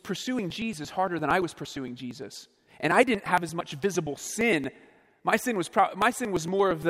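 From 0.16 s to 6.83 s the speech carries periodic USB or driver dropouts: every 0.115 s a short slice of audio, around 10 ms, is skipped outright rather than filled. Something is stalling the USB bus or audio driver on a fixed cycle, and each stall discards samples, leaving a splice in the waveform. The result is a steady train of roughly fifty ticks, close to nine per second, audible wherever the speech has signal.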